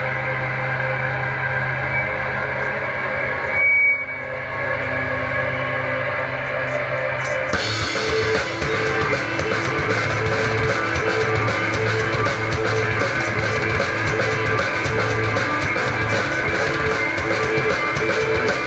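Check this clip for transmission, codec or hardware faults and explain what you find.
Nothing here points to a transmission, codec or hardware problem; the sound tops out around 8 kHz with the lowest bass trimmed, which is just what a normal call microphone and codec chain does.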